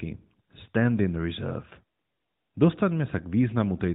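Speech, with no technical faults to report.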